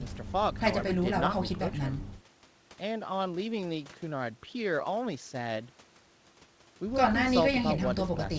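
Speech, and nothing technically wrong can be heard in it. It has passed through a WebRTC call path, and nothing is heard above 8 kHz, which fits a wideband call codec such as G.722.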